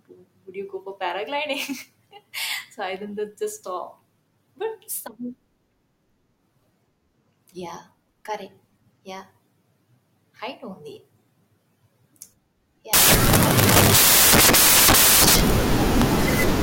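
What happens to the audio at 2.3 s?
Nothing goes wrong at 2.3 s; the speech there is intact, with no dropout, click or distortion.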